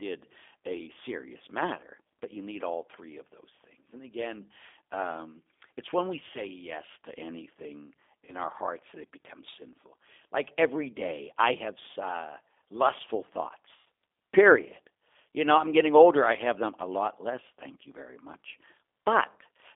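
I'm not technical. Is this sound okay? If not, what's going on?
No, not quite. The whole clip went through the G.729 codec, a phone-call voice compressor, so it sounds narrow, muffled and a bit rough and robotic throughout.

There are also two brief VoIP packet loss glitches concealed by the speech codec. Bits of the call went missing and the decoder filled the gaps by stretching the last sound and fading it. Listen at 8.25 s, right after "say yes to anything" (about 30 ms), and at 13.76 s, after "I have uh lustful" (about 100 ms).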